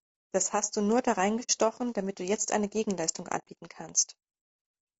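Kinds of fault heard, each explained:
Low-delay AAC compression: The whole clip of speech has a rough, grainy texture, with a hiss filling the gaps between the voice's harmonics and a top end that sounds thin and synthetic. That's the likely sign of AAC-ELD, the low-delay codec used for calls. Its very short frames can't separate pitch harmonics cleanly, and the damage is plain enough to suggest a low rate, around 32 kbps.
AAC frame loss with muting: Two soft-edged gaps appear where blocks of audio went missing and the decoder simply zeroed them. The first runs from about 1.43 to 1.50 s, roughly 60 ms, between "hast du nur da" and "damit du jetzt eine". The second, about 90 ms, sits from 3.38 to 3.48 s. The overlapping windows fade the sound out and back in, so each one is a soft-edged hole.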